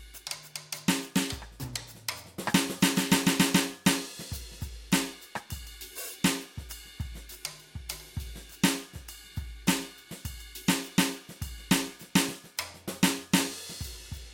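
No technical faults can be heard anywhere in this music clip. Nothing breaks into the sound at any point, and it carries on steadily to its end.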